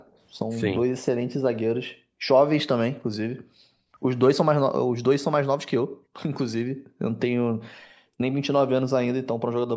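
The room sound dips at the very start, from 0.00 to 0.06 s, by about 16 dB. This is background gated by the echo canceller: while the far end's loudspeaker played, the canceller pulled the microphone down, taking the ambient sound with it.

From 0.06 to 0.18 s a very faint delayed copy of the speech surfaces, lagging by about 467 ms and sitting far below the main signal. The likely cause is an echo leak: a loudspeaker-side echo canceller failed to fully remove what its microphone picked up, and the residue was sent back down the line.

The gating then returns much more deeply. The background falls away by about 38 to 40 dB at 1.94–2.26 s, 3.33–4.00 s, 5.85–6.14 s, 6.68–7.00 s and 7.88–8.19 s. Each hole lasts roughly a third of a second, except the longer one near 3.3 s at about 0.7 s. The room sound snaps back each time the canceller releases the microphone.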